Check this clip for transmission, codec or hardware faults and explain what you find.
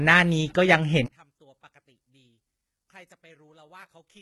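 Two faults are audible in this speech clip.

HE-AAC compression runs throughout, and the heavy damage fits a very low bitrate near 16 kbps. The treble is likely rebuilt by copying lower bands upward, so sibilants sound gritty and metallic. Plain low-bitrate AAC would sound dull and band-limited rather than falsely bright.

From 1.06 s to the end, one channel is likely inverted. Summed to mono, the centred speech drops by about 35 dB and leaves only a faint residue. A dropout or mute would leave silence, not this faint difference signal.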